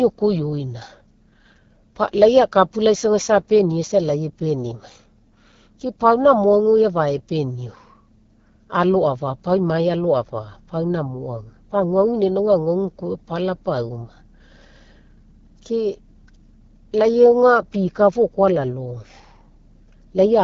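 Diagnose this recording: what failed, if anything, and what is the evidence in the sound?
Codec stage: the AMR wideband (HD Voice) codec runs throughout at a low rate, likely around the 8.85 kbit/s mode, leaving the speech rough and raspy. A spectrogram shows a hard ceiling near 6.9 kHz, with the band above 6.4 kHz filled by noise rather than harmonic structure.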